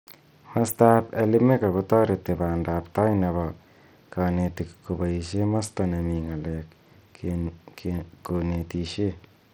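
Bluetooth SBC compression runs throughout this speech clip: the treble thins and flickers, with a gritty noise and aliasing riding on the sound. The likely cause is an SBC link starving its upper sub-bands of bits while coarsely quantising the rest, which fits a low bitrate near 80 kbps.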